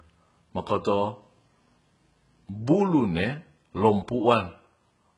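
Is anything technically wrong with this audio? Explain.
Yes. Throughout the speech, the treble sounds synthetic and gritty, with nothing above 11 kHz. The likely cause is heavy HE-AAC compression at a very low bitrate. Upper bands are rebuilt from copied lower ones, so harmonics misalign and s sounds turn metallic and lispy.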